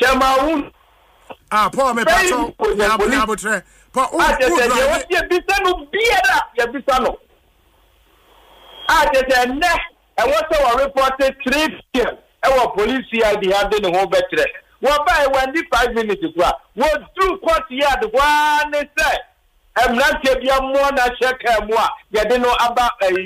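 No technical faults can be heard anywhere in the recording.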